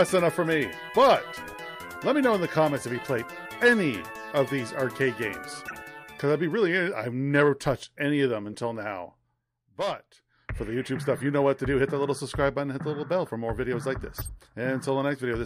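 You get four short blips where a corrupt frame was decoded: 5.67 to 5.76 s, 8.52 to 8.55 s, 11.16 to 11.21 s and 14.18 to 14.29 s. Damaged bits in a handful of compressed frames got played anyway, so misread codes threw energy into the wrong frequencies for those few tens of milliseconds. They come across as quick chirpy bursts. The first and last are the loudest, peaking around about -20 dBFS. The middle two are fainter.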